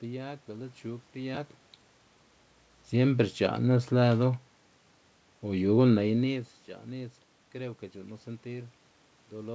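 This speech recording has no technical faults. Nothing is heard above 8 kHz, which fits a wideband call codec such as G.722, and the level shifts around 1 s and 6 s are the talker moving relative to the microphone.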